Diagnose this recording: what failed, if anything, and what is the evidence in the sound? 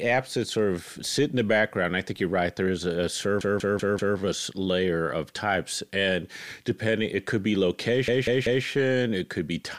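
This is a repeated-frames fault at the codec or storage stage, where a chunk of compressed audio got written or sent more than once. Right after "is a", from 3.41 to 4.18 s, a 192 ms block replays four extra times before "layer of types and" resumes, adding 768 ms. After "depending it could be", from 8.08 to 8.66 s, the same-sized block stutters three extra times, adding 576 ms. The identical loops point to duplicated frames rather than an acoustic echo.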